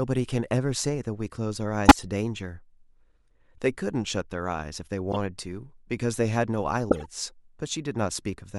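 Speech, interrupted three times by a corrupt frame decoded fault. Damaged compressed frames were played out as if valid. Misread codes and gains put energy at the wrong frequencies. Each event is heard as a chirp or noise burst. The first runs from 1.86 to 2.04 s and spans several frames. A shorter, quieter blip follows at 5.12 to 5.16 s. The third runs from 6.89 to 7.06 s. The first and third bursts are loud, peaking not far below full scale.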